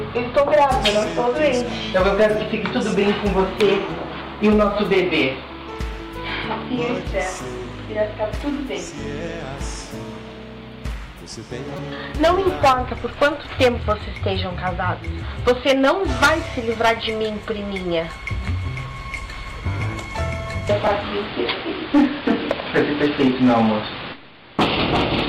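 At 11.77 to 11.79 s and again at 20.87 s, a repeated buffer occurs. Late audio made the device replay its last 5.33 ms chunk, likely a 256-sample buffer, producing brief buzzy clicks.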